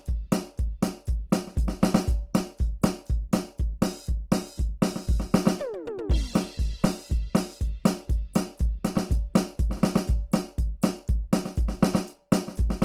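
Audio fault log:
throughout: Opus compression. The music sounds grainy, rough and noisy, with tones turning hiss-like instead of swirling, and nothing above 20.3 kHz. The likely cause is Opus in its CELT music mode filling starved bands with folded or noise content, which fits a bitrate near 16 kbps.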